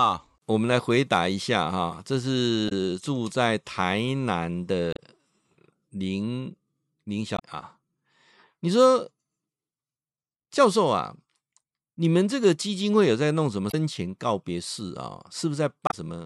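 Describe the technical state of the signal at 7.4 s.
Right there, from about 7.36 to 7.40 s, there's damaged data in the compressed stream: the decoder misreads corrupted frames, loses sync, and spits out a brief glitch, a chirp, click or short hole.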